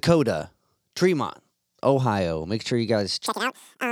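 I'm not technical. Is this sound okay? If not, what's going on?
No. From 3.26 s, right after "sure you", there's audio read two samples at a time (double speed): the player treats each pair as one step, so the speech races twice as fast and an octave higher.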